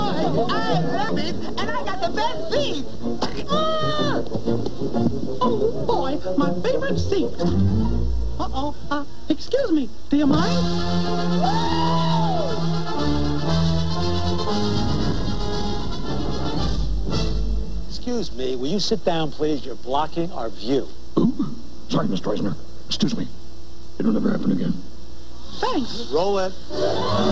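At 1.09 s there's a skip ahead: roughly half a second of audio just isn't there, and playback jumps straight to later material with no gap and nothing filled in. That points to a chunk being dropped while later audio was already queued, either lost on the way or dumped when the jitter buffer overflowed, which cuts the delay by about half a second in one go. You hear it as an abrupt splice where the two sides butt together.

Right after that, from 1.22 to 2.00 s, there's a jitter buffer speed-up. The buffer was still holding more audio than it wanted, so the receiver kept snipping out tiny pieces a pitch period or so long, about 50 ms in total, to catch up. Playback runs at about 106% speed with the pitch unchanged, so that stretch feels slightly rushed. The G.722 call path underneath is working as expected, with nothing above 8 kHz.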